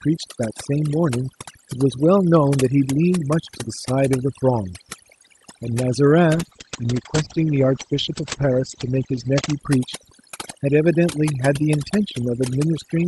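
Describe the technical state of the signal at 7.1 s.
At 7.1 s the speech sounds rough, watery and muffled, its top end cut off around 8 kHz instead of 12 kHz. This is a call bitrate drop from 6.34 to 9.65 s. The bandwidth estimate fell, so the Opus encoder coded more coarsely and narrowed its band. The sound fits a drop from about 48 to 12 kbps, held at its lowest for roughly 3 s.

Under that, the background is lowered and breaks up into twinkling specks. That is overdone noise removal, present throughout: an over-strong reduction turns frequency bands down or off whenever they near its noise estimate, removing quiet parts of the voice along with the noise.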